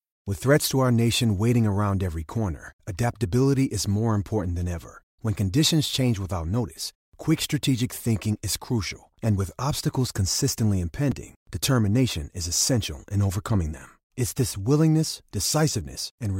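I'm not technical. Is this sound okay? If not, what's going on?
No. Twice the audio stream briefly went empty and was filled with zeros, a fault called a block of digital silence. At 3.03 s the gap lasts 0.7 ms, and at 11.12 s about 4 ms. The sound drops out and returns instantly, each time heard as a small tick or click.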